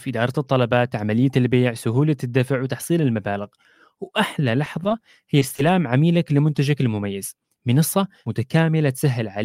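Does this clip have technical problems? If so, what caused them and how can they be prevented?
Yes. Between 4.65 and 5.03 s there are repeated stalls (stutter). Packets arrived late, and the jitter buffer ran dry four times. Each gap was bridged by extending the last sound, about 40 ms in total, the longest only 10 ms. Nothing is lost, which is what separates this from packet loss. The sound drags and hiccups rather than skipping. A larger or adaptive jitter buffer, with network priority for the voice traffic, prevents it.

Short concealed packet loss follows at 5.39 to 5.43 s and again at 5.56 to 5.60 s. In each, 20 ms of audio never arrived, and the receiver patched the hole by continuing the preceding sound. Unlike the stutter, real content is gone, heard as a brief smear or wobble. Forward error correction or redundant packets would prevent it.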